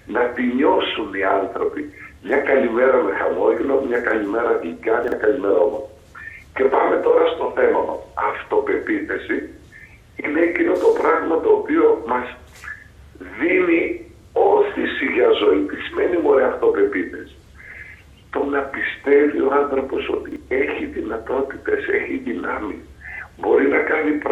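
At 5.04 s and again at 20.28 s, chunks out of order: one 40 ms chunk arrives a chunk late, swapping two segments over 80 ms. The sound briefly jumbles, and each swap leaves three hard joins.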